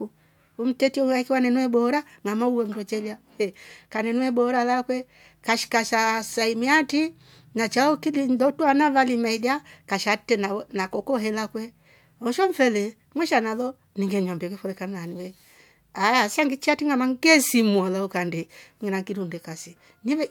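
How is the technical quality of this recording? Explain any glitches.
No technical glitches can be heard anywhere in this speech recording. There is nothing to explain, as no dropout, noise, distortion or timing problem turns up at any point.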